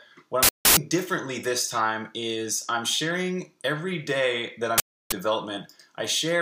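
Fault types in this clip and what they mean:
uninitialised buffer: two bursts of digital noise, 0.43–0.77 s and 4.78–5.12 s, each about 341 ms long; unwritten memory played out, fitting a 16384-sample buffer.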